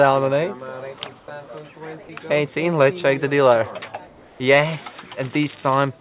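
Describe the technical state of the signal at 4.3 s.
Comfort noise replaces the background from 4.07 to 4.4 s: the quiet bed, about 31 dB below the loud parts, becomes a steady, featureless hiss about 3 dB lower, likely because discontinuous transmission paused sending and the receiver synthesized filler, band-limited like the rest below 4 kHz.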